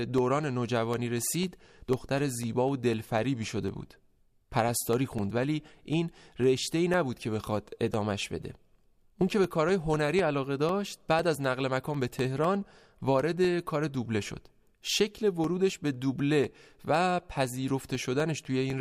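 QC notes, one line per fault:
0.18–18.70 s, periodic USB or driver dropouts: a tiny gap, roughly a millisecond, drops to silence every 0.25 s, so the speech picks up steady ticks.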